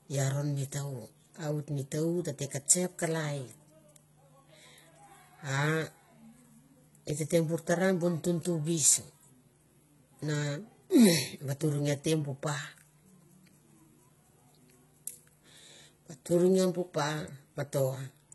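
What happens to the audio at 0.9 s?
HE-AAC compression, likely, affects 0.9 s as it does the whole clip. The treble is rebuilt by copying lower bands upward under a coarse envelope, so s sounds turn gritty and lispy. Nothing remains above 11.8 kHz, and the heavy damage fits a bitrate near 16 kbps.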